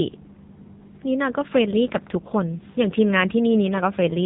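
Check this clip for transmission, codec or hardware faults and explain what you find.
One codec fault runs through the whole speech clip. AMR narrowband mobile codec throughout: nothing above 3.8 kHz survives. Few pulses model the voice, so speech sounds heavily buzzy and synthetic, which fits a low mode around 6.7 kbps.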